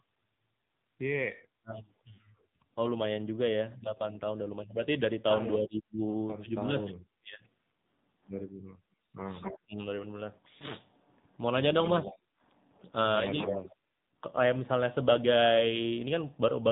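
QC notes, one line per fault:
Throughout: AMR narrowband mobile codec. Nothing above 4 kHz survives, and the speech has a buzzy, synthetic edge that fits a low AMR-NB mode around 7.4 kbps. Unlike a brief event, this colouring never lets up, because every frame is rebuilt from a coarse vocal-tract model.
1.56–1.75, 9.01–9.79, 11.95–12.17, 13.61–13.66: speech suppressed in double talk. The speech dips, by about 40, 30, 5 and 15 dB respectively, for roughly 200, 200, 70 and 50 ms. The likely cause is an echo canceller pulling down the near talker while the far side spoke. Unlike frame loss, the level is cut rather than smeared.
2.14–2.21: lost AMR speech frames. A 40 ms stretch, which fits two lost 20 ms frames, is held over from the previous frame as a short drawn-out warble with falling gain, and the speech returns rough for a moment. It is a decoder concealment artefact, not a level cut.
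9.40–9.59, 12.04–12.15, 13.37–13.73: echo leak. A delayed copy of the speech trails it by 260 ms, at about 10, 15 and 5 dB below the direct speech. This is likely loudspeaker pickup at the far end that its canceller failed to remove. Unlike suppression, it adds sound instead of removing it.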